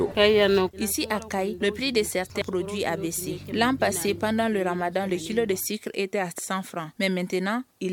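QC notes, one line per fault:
2.42–2.45 s and 6.38–6.42 s, damaged data in a compressed stream: corrupted bytes make the decoder lose frame sync and resync, leaving brief blips.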